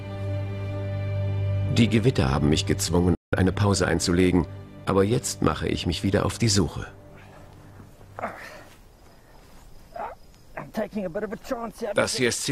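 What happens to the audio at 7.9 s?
Nothing goes wrong at 7.9 s; the audio plays through that moment intact.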